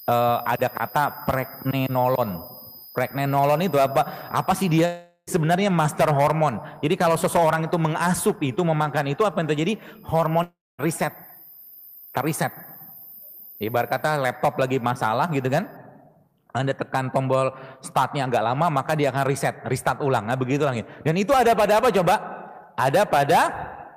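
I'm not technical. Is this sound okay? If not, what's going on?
No. A long network dropout hits at 4.85 to 5.29 s and 10.43 to 10.80 s: sound fades into a buzz, then resumes with a chunk missing, likely lost in transmission.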